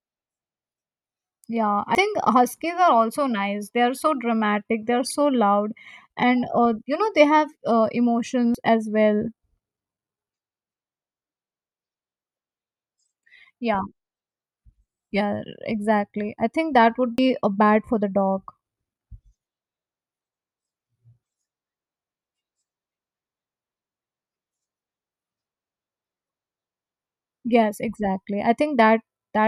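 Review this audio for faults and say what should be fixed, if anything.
Four abrupt jumps in the speech occur at 1.95 s (after "yeah i"), 8.55 s (just before "as well"), 17.18 s (between "i think that would" and "a bad for the") and 23.31 s. Each skips about a tenth of a second with no gap, which points to a likely dropped buffer (overrun): the recording software missed its read deadline, so the overwritten block vanished and its neighbours were spliced together. Larger capture buffers and a higher-priority audio thread would prevent this.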